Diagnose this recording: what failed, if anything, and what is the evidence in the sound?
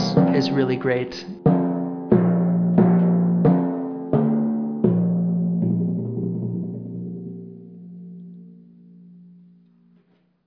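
Nothing failed in this recording, and the sound shows no evidence of any fault.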